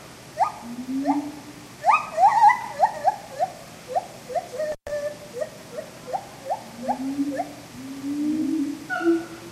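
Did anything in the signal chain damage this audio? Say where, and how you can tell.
Yes: intermittent contact in the analogue wiring at 4.72 to 4.90 s. A loose connection opens for 121 ms, cutting the audio with crackle at both edges.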